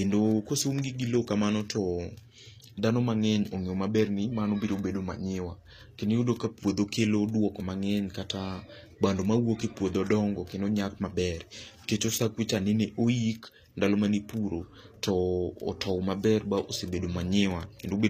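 Throughout the speech, the treble sounds synthetic, with gritty, lispy s sounds and nothing above 14.9 kHz, likely HE-AAC compression rebuilding highs from copied lower bands at roughly 24 kbps.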